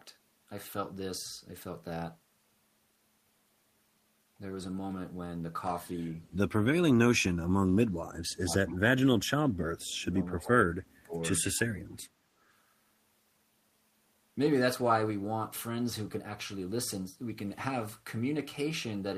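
With both ends talking at once, the echo canceller likely mistook the near talker for echo and turned it down. This speech suppressed in double talk dips about 30 to 35 dB at 7.1 to 8.83 s, 9.68 to 10.13 s and 10.32 to 11.14 s. Within that last dip, at 10.39 to 10.44 s, loudspeaker pickup the canceller likely failed to remove comes back as echo leak: a faint scrap about 30 dB down, trailing 273 ms behind.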